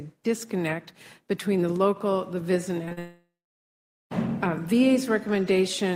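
Short concealed packet loss hits in three back-to-back bursts, at 2.85 to 2.89 s, 2.89 to 2.93 s and 2.93 to 2.99 s, roughly 20, 20 and 40 ms missing. The receiver patched each gap by extending the preceding sound, leaving a brief smeared, wobbling stretch.

Long network dropout follows from 2.99 to 4.13 s, likely because no packets arrived for over a second. The concealment first stretches the last sound into a fading buzz or hiss, then about 0.82 s of silence remains before audio resumes, the intervening material gone.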